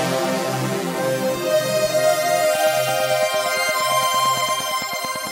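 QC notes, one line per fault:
2.44–5.28 s: train of clicks, roughly 30 regular ticks at 8.85 per second, peaking about 5 dB above the sound, likely interference or a faulty connection or power supply.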